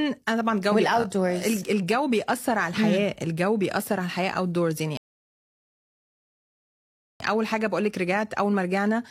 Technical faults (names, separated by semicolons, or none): rebuffering stall